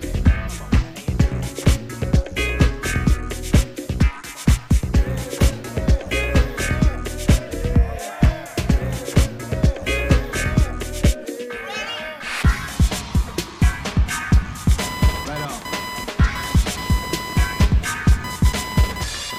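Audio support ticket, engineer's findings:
Computer activity noise, 14.79 s to end. Buzzing chirp near 1 kHz, about 10 dB below signal. CPU/GPU load shifting shared ground into audio path.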